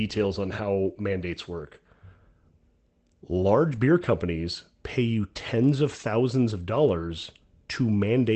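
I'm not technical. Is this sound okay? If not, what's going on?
No. Around 3.75 to 3.81 s, a short stretch of the call's data went missing in transit, which sounds like two lost packets. Each following packet carried a smaller backup copy of the missing piece, and the receiving end played those copies instead. This is a lost packet rebuilt from error correction. So there's no silence, just a brief rough, noisier patch in the speech, on top of the call's usual cut-off above about 8 kHz.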